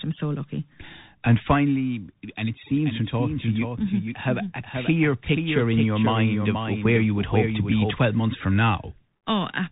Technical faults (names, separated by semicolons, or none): Bluetooth CVSD headset codec; doubled audio track